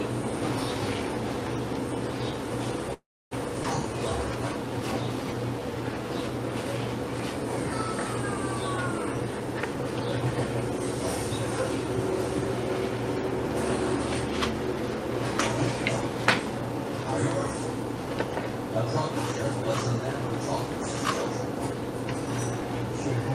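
At 2.93 s a call audio freeze begins and lasts until 3.33 s. The last sound carries on briefly as a fading fill, then about 290 ms of silence. The likely cause is delayed packets emptying the jitter buffer. Nothing is lost. The audio resumes where it stopped, roughly 380 ms later.

From 3.63 to 3.66 s there is a skip ahead. About a tenth of a second of audio is dropped. Playback jumps forward almost seamlessly. The two sides join nearly directly, with only a tiny bridge. This cuts some of the extra delay.

From 3.89 to 6.04 s comes a jitter buffer slow-down. The receiver repeats single pitch periods to rebuild its reserve. It adds 93 ms in total. The audio runs at 96% speed, with the same pitch. Sounds are slightly drawn out.

From 16.10 to 23.05 s a jitter buffer speed-up runs. The buffer holds too much audio. The receiver trims short pitch-period pieces, removing about a fifth of a second. 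Playback runs at 103% speed without any pitch change.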